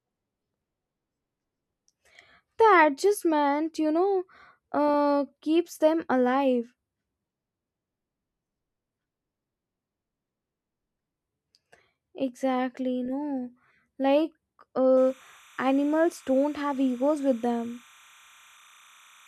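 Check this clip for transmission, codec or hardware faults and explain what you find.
Timecode bleed from 14.97 s to the end: 30-frame linear timecode leaking from an adjacent line switches between tones near 1 and 2 kHz, a faint chirping warble around 30 dB below the speech.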